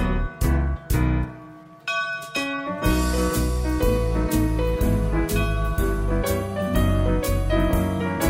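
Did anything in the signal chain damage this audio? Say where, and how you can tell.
No, nothing in the signal chain damaged this audio, and there is no stage to point to.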